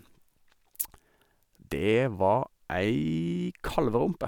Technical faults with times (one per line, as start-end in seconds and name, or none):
none